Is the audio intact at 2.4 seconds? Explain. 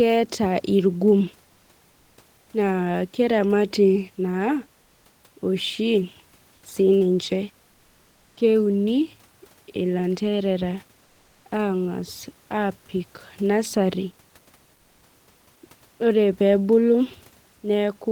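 No. From 2.41 to 2.49 s, likely discontinuous transmission paused sending, so comfort noise in place of the background fills 80 ms: a steady, featureless hiss about 1 dB quieter.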